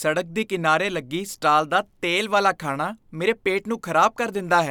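Speech recording with no technical faults audible anywhere in it.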